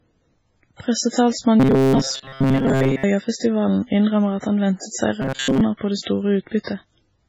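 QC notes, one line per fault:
Throughout: MP3 compression, likely at a very low bitrate; heavy damage, and the speech turns watery and swirly with smeared attacks.
1.60 to 3.04 s and 5.22 to 5.62 s: robotic sound from repeated short buffers; about 7.5 ms of audio is looped, most of the time, which fits buffers arriving too seldom, forcing a rigid metallic 134 Hz buzz.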